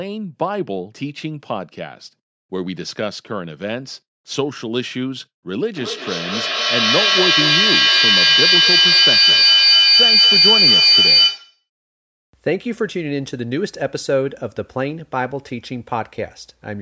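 From 5.76 s to 11.68 s the speech is overtaken by feedback howl. Two devices in the same room were joined to the call, so each pass from loudspeaker back into microphone came back louder than the last. The tone narrows onto a pitch of around 5 kHz, well inside the call's 8 kHz bandwidth, pulsing roughly every fifth of a second with the loop delay, and peaks about 9 dB above the speech before the loop is broken.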